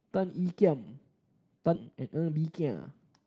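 At about 1.75 s there's a skip ahead: most of a second of speech got dropped while later audio was already queued, so it jumps straight across with no gap. From 1.85 s to the end, a jitter buffer speed-up trims tiny pitch-period slices, roughly a fifth of a second in all, so the speech runs about 13% faster at the same pitch and sounds a bit rushed, all over the call codec's 8 kHz bandwidth.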